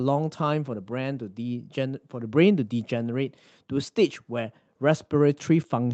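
Lost packets rebuilt from error correction at 3.01 to 3.07 s: about 40 ms of speech, which fits two lost 20 ms packets, was filled from lower-bitrate copies carried in the following packets, so there is no gap, but that stretch sounds rougher and noisier within the call's 8 kHz band.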